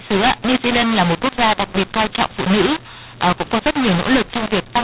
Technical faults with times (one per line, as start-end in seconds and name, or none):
0.00-4.84 mu-law and A-law mixed up